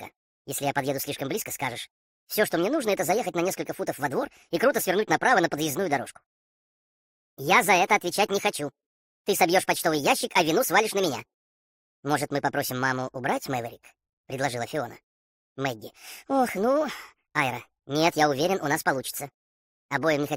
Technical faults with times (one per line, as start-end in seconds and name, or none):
0.00-20.37 wrong sample rate